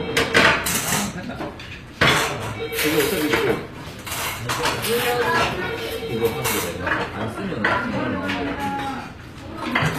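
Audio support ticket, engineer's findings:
HE-AAC compression, throughout. Treble synthetic and gritty, harmonics not lining up across the crossover; nothing above 14.9 kHz. Likely spectral band replication rebuilding upper bands from lower ones, which fits a low bitrate around 24 kbps. Damage plainly audible.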